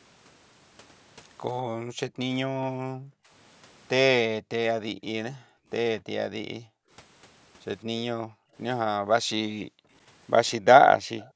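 From 1.76 to 3.3 s, then 4.41 to 4.5, 4.84 to 5.7, 6.49 to 6.9, 8.21 to 8.55 and 9.61 to 9.91 s, the room sound keeps ducking by about 40 dB. That's background gated by the echo canceller, which clamps the mic while the far end plays. Between 11.19 and 11.3 s a faint delayed repeat arrives roughly 197 ms late and about 25 dB under the speech, likely an echo leak. From 11.3 s to the end the gating returns with a dip of about 37 dB.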